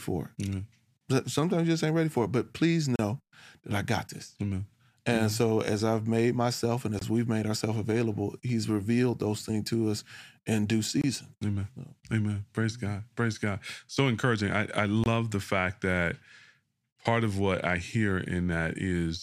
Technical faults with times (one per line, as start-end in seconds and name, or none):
2.96-2.99 gap at a join of encoded pieces
6.99-7.01 gap at a join of encoded pieces
11.01-11.04 gap at a join of encoded pieces
15.04-15.06 gap at a join of encoded pieces